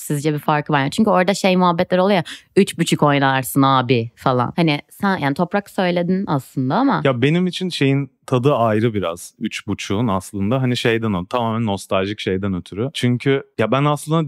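From 8.36 to 11.52 s, after "benim için şeyin", sample clock jitter adds hiss. The converter clock wobbles by a few microseconds. Roughness tracks loud, bright speech, about 35 dB down.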